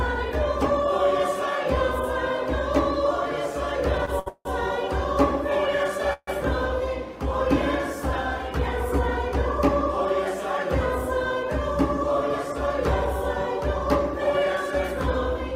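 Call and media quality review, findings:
Short stall from a late packet, 4.05 to 4.10 s and 4.20 to 4.28 s: last sound held 21 ms, then 68 ms. Jitter buffer ran empty awaiting a late packet; playback resumed at the same point, nothing lost, delay grew each time.

Call audio freeze, 4.28 to 4.47 s and 6.13 to 6.29 s: sound continues and fades, then 40 ms of silence, about 170 ms and 140 ms in total. Likely packets held up in transit draining the jitter buffer; audio resumes where it stopped, inserting a gap.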